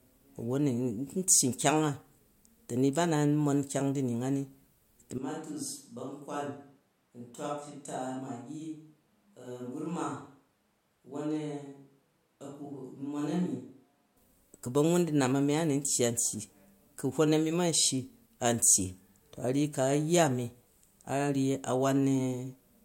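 Speech with a switch to a distant microphone from 5.18 to 14.17 s: the voice abruptly turns roomy and thin, about 10 dB quieter, likely from the close mic dropping out.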